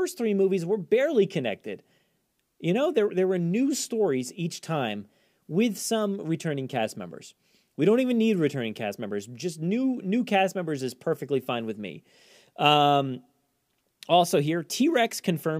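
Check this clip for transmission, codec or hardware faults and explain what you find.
Nothing stood out on listening to this speech recording.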